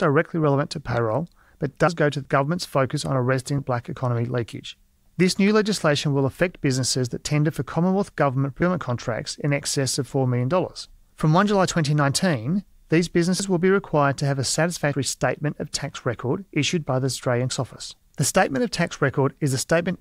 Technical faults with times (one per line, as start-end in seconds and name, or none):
3.58 dropped buffer (overrun)
8.62 dropped buffer (overrun)
13.40 dropped buffer (overrun)
14.93 dropped buffer (overrun)
17.49 dropped buffer (overrun)